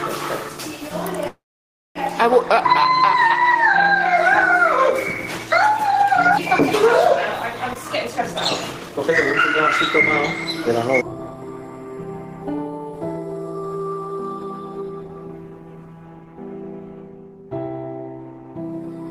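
At 1.27 s a call audio freeze begins, likely from delayed packets draining the buffer: the last sound trails off briefly, then 580 ms of silence, shown as a flat waveform and blank spectrogram band, before resuming intact at 1.98 s.

A jitter buffer speed-up runs from 7.68 to 9.47 s at 130% speed, cutting about half a second, then from 10.69 to 12.00 s at 108%. Both sound hurried at unchanged pitch. Spectrogram features are squeezed in time while harmonic spacing stays put.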